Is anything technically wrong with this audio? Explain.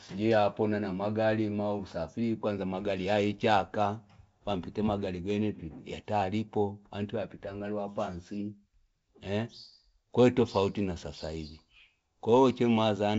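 No, nothing is technically wrong with this audio.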